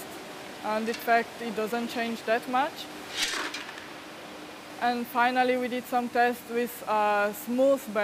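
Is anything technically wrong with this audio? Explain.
No, nothing here sounds technically off to me; it's a perfectly well-behaved bit of audio with no faults to point at.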